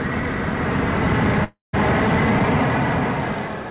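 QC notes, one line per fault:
1.44 to 1.75 s, long network dropout: the sound smears into a fading buzz, goes silent, then resumes with a chunk gone, likely from packets that never arrived.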